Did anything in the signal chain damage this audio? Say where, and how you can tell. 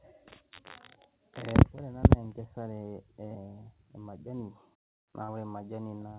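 Yes. At the network stage, a short concealed packet loss at 5.24 to 5.30 s: 40 ms of missing audio was patched by extending the preceding sound, so it smears briefly rather than dropping to silence like a true dropout.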